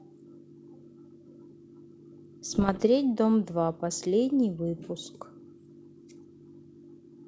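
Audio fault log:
2.52–2.85 s, bit errors on an ADPCM link: pops and rough bursts with brief level jumps, ringing as flipped bits upset the decoder's step size, not silent gaps like packet loss.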